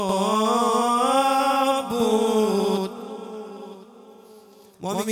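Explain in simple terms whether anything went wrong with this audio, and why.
Yes, something went wrong. From start to finish, every sound is followed by a second copy about 93 milliseconds later, at the same loudness. This is channel delay (doubling): one of the two stereo channels ran late, which fits a 4096-sample buffer, and the two were then mixed into one. Unlike a room echo, the copy doesn't fade or repeat. There is just one equally strong slap, always the same distance behind.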